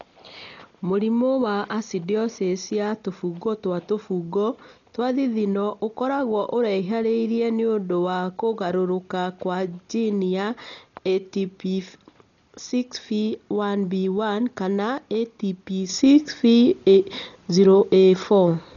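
From the first second the speech sounds dull and smeared, with a rough, fluttering grain clinging to voiced sounds. This points to heavy Dolby Digital compression, likely from an AC-3-style encoder at a very low rate, around 40 kbps. Starved of bits, it cuts the band and replaces many frequency lines with dither noise. A spectrogram shows a hard ceiling at 6.9 kHz with nothing above it, and speckled, blotchy texture between harmonics instead of clean striations.

At 15.89 s the level steps up by about 8 dB in a single sample and stays there to the end at 18.76 s. The speech and the background noise rise together, which marks a sudden gain jump, likely a digital gain change or bit shift applied with no ramp. The waveform envelope jumps abruptly to a taller band with no transition, and a spectrogram shows the whole picture brightening at once along a sharp vertical edge.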